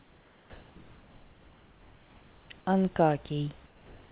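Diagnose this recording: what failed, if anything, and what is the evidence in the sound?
From 0 to 0.76 s the start is steady, featureless noise, and about 300 ms of speech onset is missing. This is likely sound dropped by the voice detector during call processing, with comfort noise filling the gap. Packet-loss concealment would repeat or smear sound instead.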